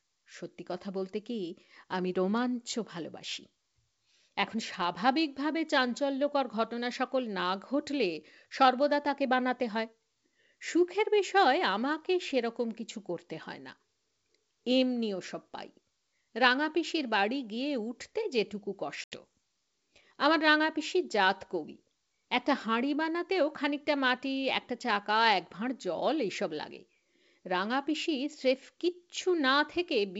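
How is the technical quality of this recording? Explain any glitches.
The recording is clear, wideband G.722 speech at 64 kbit/s, with one audible glitch.

From 19.04 s to 19.21 s there is packet loss on an ADPCM call. About 80 ms of audio, roughly four packets, is missing and replaced by silence. The hole has hard edges. G.722 codes each sample as a difference from a prediction. The lost packets leave the decoder's predictor and step size out of step with the sender's. So the speech returns with some distortion. It settles within tens of milliseconds.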